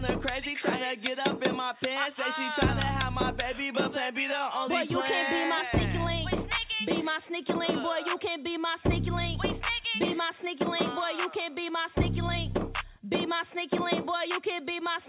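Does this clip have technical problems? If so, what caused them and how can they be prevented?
No, nothing here is faulty; the lack of content above 4 kHz is what a G.711 mu-law call path passes by design, so there is nothing to fix or prevent.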